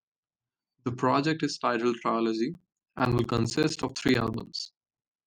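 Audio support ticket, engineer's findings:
Periodic USB or driver dropouts, 2.54 s to 5.17 s. Regular ticks every 64 ms, about forty in all, heard only over the speech. Each gap is roughly 10 ms of silence. Probable component: USB bus or audio driver, blocked at a fixed interval by a background task.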